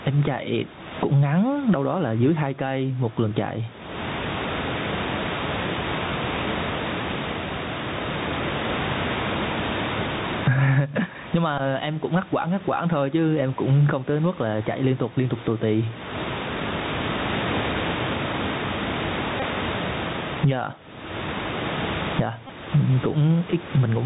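From start to end, the level pumps, swinging by around 25 dB. This gain pumping is likely from gain set far too high, with a fast limiter pulling it down on peaks.

The whole clip also carries Bluetooth CVSD headset codec damage, plainly audible. Nothing reaches above 4 kHz. S sounds turn scratchy, loud bright sounds distort as they outrun the adapting step, and a granular hiss sits under the speech. This fits a 64 kbps CVSD link.

Bluetooth headset packets are repeated at 0.79 s, 11.58 to 11.60 s, 19.40 to 19.43 s and 22.47 to 22.51 s. Lost packets were replaced by decoding the previous one again. The first is the shortest. The later ones grow longer, and each gives a brief buzz near 267 Hz.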